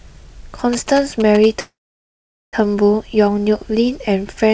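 From 0.73 to 1.46 s, GSM signalling bursts intrude on the speech: a galloping dit-dit-dit of ticks and short buzzes at a 217 Hz repeat rate, roughly 10 dB below the speech. A nearby 2G phone's radio bursts were rectified by the audio circuitry. A spectrogram shows evenly spaced vertical stripes with a 217 Hz harmonic comb. The waveform shows clusters of sharp pulses.

From 1.60 to 2.56 s comes a call audio freeze. The last sound carries on as a fading buzz, then goes silent for about 0.81 s. The speech resumes where it stopped, delayed by about 0.93 s with nothing lost. The likely cause is packets held up in transit, which emptied the jitter buffer. The waveform shows a decaying tail, then a flat line. The spectrogram shows a smeared band, then a blank column. Across the clip, the call path's band limit leaves nothing above 8 kHz.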